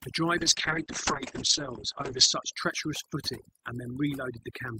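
Wi-Fi interference runs through the whole clip, from 0 s to the end. A nearby Wi-Fi radio's transmissions are being picked up and rectified by the audio circuitry, so its regular beacon comes through as a steady tick every 102.4 ms, close to ten per second. The ticking sits at a low level, roughly 25 dB below the speech.

Overdone noise removal also affects the entire clip. A noise reducer set far too aggressively has been pulling individual frequency bands down or out whenever they resemble its noise estimate, and the quieter parts of the speech are removed along with the noise. The gaps fall to near silence scattered with small twinkling specks.

A call bitrate drop runs from 0.39 s to 2.59 s. The call's bandwidth estimate fell, and the encoder was forced onto far fewer bits. The coarseness heard here fits a fall from about 40 kbps to about 9 kbps, held at its lowest for about 1.9 s. 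Audio bandwidth narrows from 20 kHz to 8 kHz, so the speech turns muffled and rough, with sibilants dulled, until quality returns after 2.59 s.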